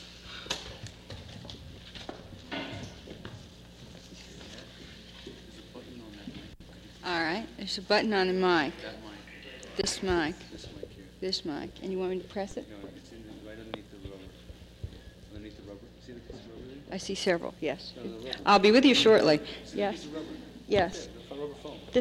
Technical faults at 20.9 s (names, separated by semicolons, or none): DC step